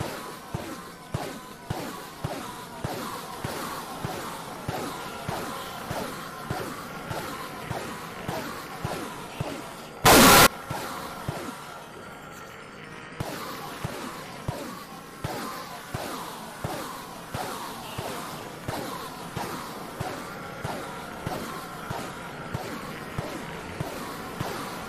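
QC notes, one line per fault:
10.06–10.47 s, float read as integer: sound turns loud, harsh and square, held at a nearly fixed, high level; waveform shows a flat-topped block, spectrogram broadband smear. Likely 32-bit float samples read as integers.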